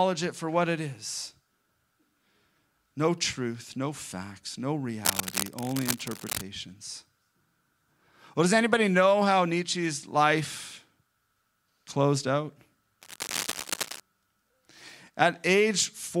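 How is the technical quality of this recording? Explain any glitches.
The recording has two bursts of cable scratch noise. Cable scratch noise occurs from 5.05 to 6.44 s, just after "truth no facts no", and again from 13.01 to 14.01 s, after "closed out". The likely cause is a worn cable or connector being moved. Its contact resistance jumps rapidly and injects dense, ragged noise into the signal. The first burst sits only about 5 dB below the speech and scrapes harshly over it. The second, about 10 dB down, is a quieter rustle.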